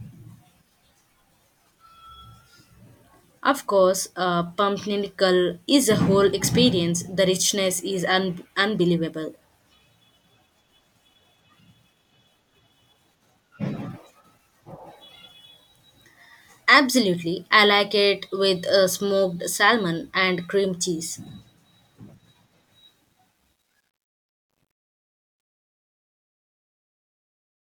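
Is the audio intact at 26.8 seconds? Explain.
No. At 26.8 s the tail of the fade-out sounds gritty and grainy. This is truncation distortion on a fade, present from 22.72 s to the end and worst from 24.43 s onward. The fade stage keeps too few bits and adds no dither, which fits roughly 11-bit resolution. As the level shrinks toward the smallest step, the waveform collapses into a few coarse square steps.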